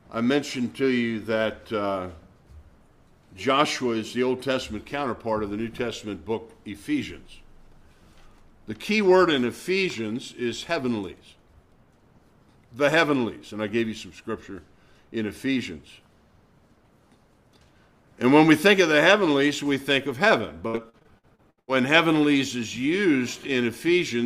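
From 20.67 to 21.70 s there is repeated packet loss, heard as robotic sound. Audio packets went missing or arrived too late again and again, and each hole was bridged by extending the preceding sound. Concealment covers about 38% of this one-second span, with roughly nine short gaps, the longest 84 ms. Because the gaps come in quick succession, the patched fragments stack up and the passage turns choppy, with small pieces dropped out.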